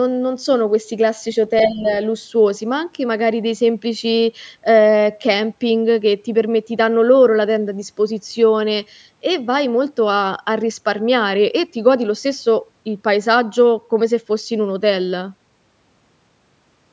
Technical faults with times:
1.58-1.94 other side's voice leaking through
1.67-1.86 speech suppressed in double talk

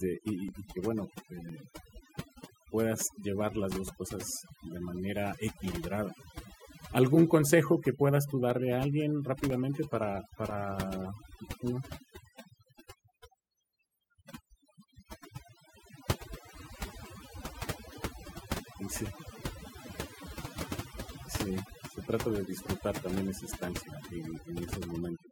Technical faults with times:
0.00-25.32 overdone noise removal
0.48-17.49 periodic USB or driver dropouts

